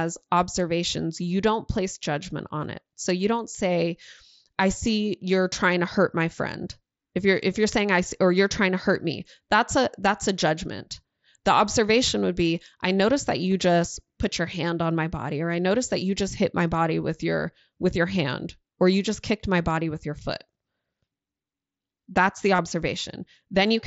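Concealed Bluetooth headset packet loss: at 13.52 s a single lost headset packet, about 7.5 ms, is patched from the preceding waveform and is nearly hidden. From 22.56 to 22.59 s a 30 ms gap, which points to about four lost packets, is filled by repeating recent audio, giving a short buzzy tone at full level and a slight warble as the real signal resumes through the wideband mSBC link.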